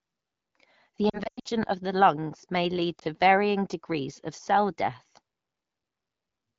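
From 1.09 to 1.48 s, just before "of the lungs may", lost AMR speech frames break up the speech. The decoder's concealment mutes and fades the sound over about 360 ms, with gaps up to 100 ms. At 2.99–3.04 s, between "the lungs may lead" and "varying degrees of cell", a single lost frame causes a brief dip.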